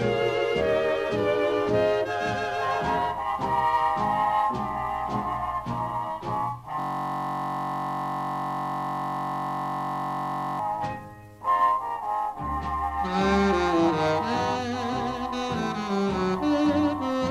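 At 6.80 s the audio locks into a system hang loop that lasts until 10.59 s. The host or driver stalled while the playback hardware kept reading the same ring buffer, so a 21.33 ms slice repeats exactly, roughly 180 times, which fits a 1024-sample buffer. Because the loop is so short, it comes across as a steady, mechanical buzz at about 46.9 Hz rather than a distinct stutter, and it stops abruptly at 10.59 s.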